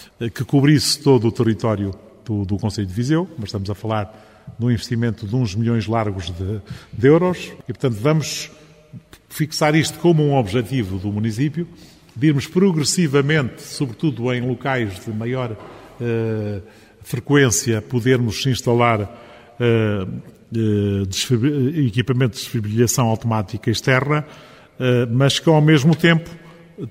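Sharp single clicks at 6.14, 13.23 and 24.92 s, each likely from dropped samples: a fraction of a millisecond missing, so the waveform jumps abruptly.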